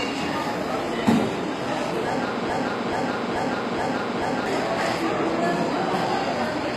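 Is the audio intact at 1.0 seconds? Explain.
No. At 1.0 seconds, as through the whole clip, the treble is plainly damaged: bright but gritty and metallic, with nothing above 14.9 kHz. This is HE-AAC compression, likely at a low bitrate. The codec keeps only the lower spectrum and fills in the top by copying lower bands upward under a coarse envelope, so the upper harmonics don't align with those below. On a spectrogram, the high band looks smeared and repeated above a crossover and stops sharply at 14.9 kHz.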